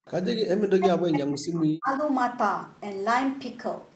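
From 0.06 to 0.11 s, a faint, delayed copy of the speech slips in behind the talker, trailing by about 150 ms and sitting roughly 30 dB below the main signal. This is an echo leak, likely from a far end playing the call over a loudspeaker, where the echo canceller let a scrap of the returned signal through and it travelled back down the line.

From 0.54 to 2.02 s, the speech repeatedly sinks and drops out in pieces, with the deepest dips falling by around 40 dB and roughly a second and a half of the stretch affected. This is speech suppressed in double talk. The likely cause is both sides talking at once: the echo canceller could not tell the local talker from the loudspeaker echo and pulled the level down on everything. The whole clip is band-limited to 8 kHz, consistent with the Opus call path at about 20 kbps.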